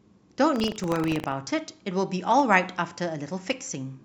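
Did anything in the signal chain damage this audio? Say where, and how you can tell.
Yes. From 0.52 to 1.36 s there's buffer tearing at the driver or buffer stage: a steady 25 Hz rattle riding on the speech. The writer and reader have slipped, so a small slice of each period replays audio about 70 ms stale, with hard joins.

The second fault is an electrical switching spike in the analogue wiring at 2.39 s: a sharp snap sitting on top of the sound rather than replacing it. That's likely a nearby switch or discharge arcing into the line.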